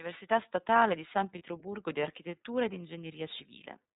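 Throughout, the speech carries plainly audible iLBC codec damage: the voice sounds slightly rough and synthetic. Each frame is coded on its own, and the sound fits the 13.33 kbps mode with 30 ms frames. A spectrogram shows a hard ceiling at 4 kHz with nothing above it.

From 1.38 to 1.41 s, one lost iLBC frame leaves a 30 ms gap. The decoder fills it by repeating the last pitch cycle mixed with noise, which sounds like a brief buzzy, held vowel before the voice snaps back. On a waveform, near-identical periods repeat; on a spectrogram, the harmonics go flat and smeared.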